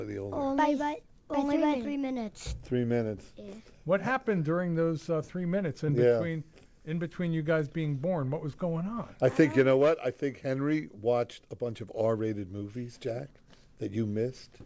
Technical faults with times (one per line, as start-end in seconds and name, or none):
5.86-5.90 short concealed packet loss
12.60-12.63 short concealed packet loss